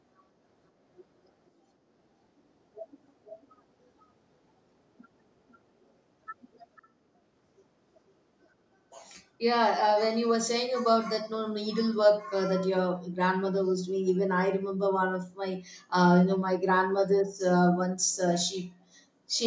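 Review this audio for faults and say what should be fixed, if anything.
Echo leak at 3.26–3.46 s and 6.76–6.88 s: a copy of the speech returns 0.5 s late, roughly 20 then 30 dB down. It is a distinct repeat, not reverb's smear, and likely comes from incomplete loudspeaker echo cancellation. Headphones or better echo cancellation on the far end would prevent it.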